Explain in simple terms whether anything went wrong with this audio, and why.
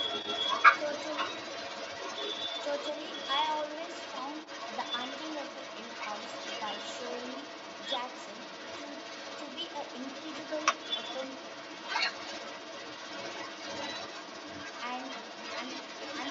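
A second voice runs underneath the main speech for the whole recording, from 0 to about 16.3 s, roughly as loud as the talker. This is the other side's voice leaking through, likely because the talker's device played the far end on a loudspeaker and the echo canceller failed to strip it from the microphone. Room echo would only repeat the talker. Here the extra voice is a different person, which marks it as leakage.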